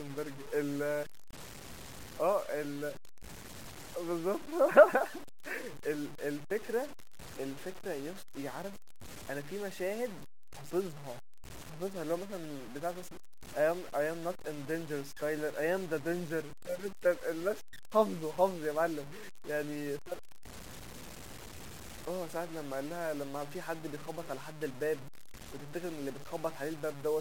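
From start to finish the speech carries grainy, signal-following distortion, likely low bit depth without dither: the samples appear truncated to around 7 bits, so the rounding error tracks the waveform instead of forming steady hiss. The error sits only about 15 dB below the speech, and quiet passages sound gritty. On a waveform, low-level stretches show visible stair-steps. A spectrogram shows broadband smearing that rises and falls with the speech rather than a constant noise floor.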